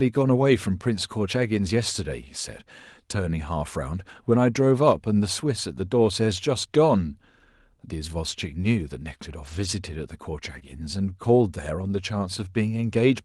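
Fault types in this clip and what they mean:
Lost packet rebuilt from error correction: Packets of this speech went missing in transit, and the decoder recovered each one from the low-bitrate backup copy carried in the following packet, so no gap appears. The longest stretch runs from 9.43 to 9.65 s, with about 120 ms rebuilt, which fits a run of six packets. Two single 20 ms repairs follow at 10.55 s and 10.63 s. Each rebuilt section sounds rougher and noisier than the surrounding Opus audio.
Short concealed packet loss: About 20 ms of audio near 10.6 s, between 10.59 and 10.63 s, arrived too late or not at all, and no backup copy covered it. The receiver extrapolated the preceding sound to fill roughly 15 ms of the hole, then blended back into real audio. It comes out as a brief smear or wobble sandwiched between the two error-corrected repairs.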